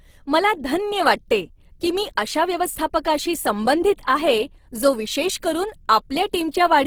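Low-bitrate Opus compression, likely in music mode, fills starved bands with noise throughout, so the speech sounds plainly rough and grainy, as at about 16 kbps.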